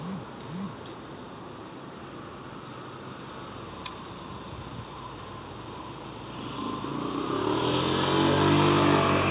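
No technical faults can be heard; the sound has come through a call path whose narrowband coding leaves nothing above 4 kHz, which fits G.711 mu-law at 64 kbps.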